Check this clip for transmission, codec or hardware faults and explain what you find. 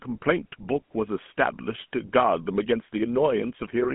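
The whole clip carries a GSM full-rate codec fault. Throughout the speech, a gravelly, buzzy roughness is plainly audible. The codec rebuilds the voice from a vocal-tract filter driven by a sparse, regularly spaced pulse excitation, which fits the 13 kbps full-rate coder. A spectrogram shows energy confined to roughly 150 Hz to 3.5 kHz with nothing above 3.8 kHz, and smeared, grainy harmonics in place of clean pitch striations.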